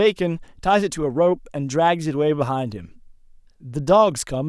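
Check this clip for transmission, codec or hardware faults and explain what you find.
No transmission, codec or hardware faults.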